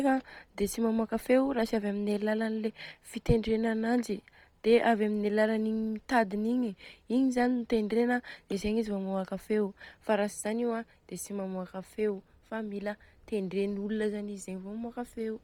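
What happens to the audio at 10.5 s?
At 10.5 s the speech carries heavy codec damage, breathy and grainy up top, likely Bluetooth LC3 compression running throughout, sounding like roughly 32 kbps with 10 ms frames filling stripped highs with noise.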